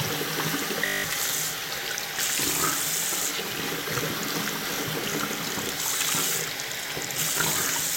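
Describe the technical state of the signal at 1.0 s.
At 1.0 s the sound is caught in a system hang loop from 0.86 to 1.04 s: the machine stalled while the hardware replayed one 20 ms slice nine times, giving a steady 50 Hz buzz rather than silence or a stutter, with about a fifth of a second of audio lost.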